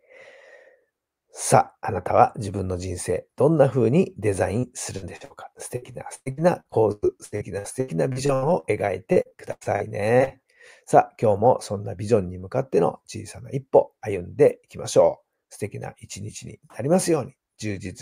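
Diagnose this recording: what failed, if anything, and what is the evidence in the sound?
Repeated packet loss (robotic sound) hits the speech at 4.59–5.32 s, 5.76–8.65 s and 9.12–10.32 s. It is a network-stage fault: short runs of lost or late packets, up to 114 ms, are bridged by extending the last audio, so roughly a quarter of each stretch turns choppy.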